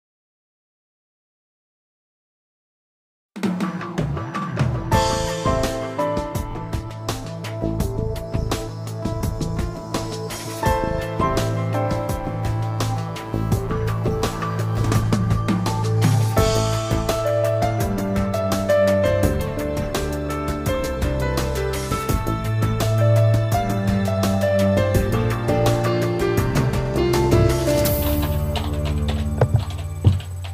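The audio has repeated frames. A short block plays twice at 4.41–4.46 s, 6.51–6.53 s, 11.91 s and 26.84–26.89 s. Each repeat is a brief stutter. The 46 ms and 23 ms blocks fit one or two compressed frames.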